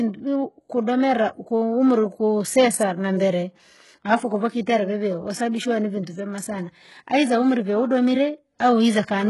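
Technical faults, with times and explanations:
Throughout, HE-AAC compression: the speech has nothing above about 11.5 kHz, and the treble that remains sounds synthetic and grainy, with s sounds coming out gritty and lispy. The likely cause is this codec at a very low bitrate, roughly 12 kbps. Only the lower spectrum is truly coded, and the upper bands are rebuilt by copying lower content upward under a coarse envelope, so those harmonics no longer line up with the voice beneath.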